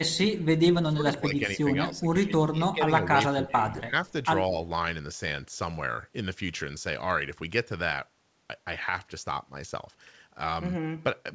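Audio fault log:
0.00–0.06 s, 0.30–0.43 s, 0.82–2.07 s, 2.26–4.06 s and 4.48–4.63 s: speech suppressed in double talk. The level dips by up to about 20 dB at the very start, about 15 dB in the middle stretches and about 10 dB at 4.48 s. In the longest run, 2.26 to 4.06 s, roughly a second and a half is pulled down in pieces. An echo canceller likely could not separate its own talker from loudspeaker echo while both sides spoke, so it attenuated everything.
4.07–4.12 s: echo leak. A faint, delayed copy of the voice, about 40 dB below the speech and 184 ms late, slips through as a brief scrap right after the longest suppressed stretch. One side is playing the call on a loudspeaker, and its echo canceller likely failed to remove everything its microphone picked up, so a trace was sent back. Like the rest of the call audio, the leak has nothing above 8 kHz.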